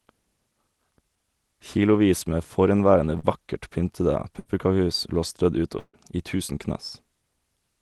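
At 3.19 to 3.25 s, just before "vakkert pyntede", there is a short concealed packet loss. About 40 ms never arrived in time. The receiver extended the preceding sound, leaving a brief smear. Two bursts of packet loss follow. At 4.39 to 4.47 s, right after "vakkert pyntede", 60 ms is lost and replaced by a held, fading continuation. At 5.79 to 5.95 s, 140 ms goes missing. The stretched sound fades out and then falls silent for about 50 ms before the audio resumes further on.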